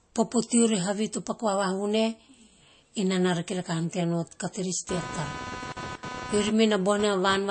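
From the start the whole speech clip carries MP3 compression damage, plainly audible. Nothing comes through above about 8.3 kHz, so the top end is sliced off flat, and the band below has that watery, swirly quality where quiet detail flickers in and out between frames. Sibilants get a metallic edge and consonant attacks smear a bit. That's what you'd expect from an encoder starved of bits, and the sound fits a low bitrate in the region of 34 kbps, likely the cause here.

Then at 4.89 s, right after "tea nao carterets", computer activity noise comes in and stays to the end. It's a buzzy, chirping rasp pulsing at roughly 300 Hz, and it sits loud, only about 10 dB under the speech. It follows the machine rather than the talking. Load swings in the processor or graphics card push current around the shared ground, and that wobble leaks straight into the audio path.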